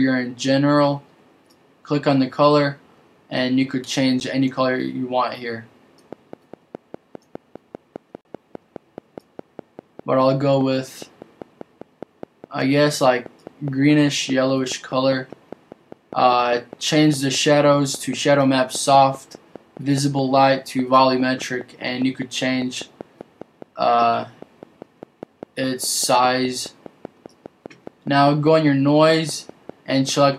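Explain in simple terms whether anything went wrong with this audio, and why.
Two things went wrong here.

The first is a block of digital silence, which happens twice. The sound simply drops to nothing and comes back, with no fade in or out. At 4.2 s the gap lasts only 10 ms, so it comes across as a tick or a quick dip. From 8.21 to 8.25 s it lasts 40 ms, long enough to hear as a short hole. This happens when the playing program fails to supply the next piece of audio in time, or when a calculation produces invalid numbers.

The second is a train of clicks. From 6.13 s to the end, at 30.30 s, a click sounds about five times every second at a steady, regular pace, roughly a hundred in all. The clicks are much the same each time, and they tick away over the sound and through any pauses too. Something outside the audio itself is adding these pulses, likely electrical interference from nearby equipment, a loose or faulty connection, or a faulty power supply.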